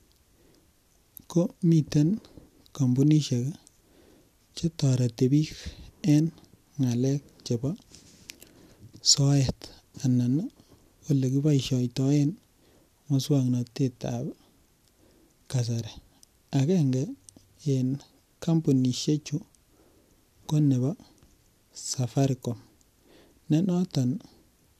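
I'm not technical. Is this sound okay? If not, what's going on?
Yes, the sound is okay. There is nothing technically wrong to point out at any moment in this speech recording.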